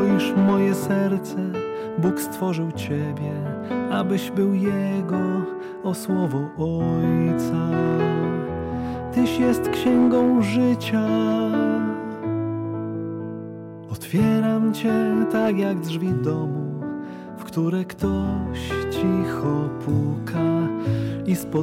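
Hard clipping runs through the whole clip: the signal was driven about 5 dB past what some stage could pass, so the loudest peaks get sliced flat. Only a small fraction of samples, under one percent, hit the ceiling, so you hear crackle on peaks.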